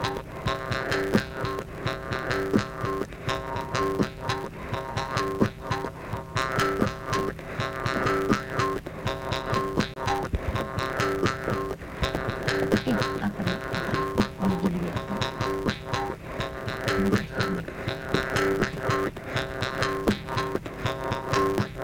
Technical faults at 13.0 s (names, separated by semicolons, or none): block size mismatch (truncated)